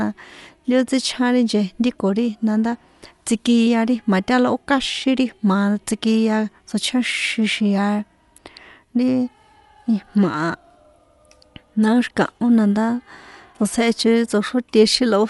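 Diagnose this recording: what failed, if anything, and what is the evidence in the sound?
Dolby Digital compression runs throughout the speech, a codec-stage fault. Nothing sounds above 11.4 kHz. The encoder narrowed the band and gave many frequency lines no mantissa bits, so the decoder filled them with dither noise, leaving plainly audible dull, rough fluttering that likely fits a bitrate near 64 kbps.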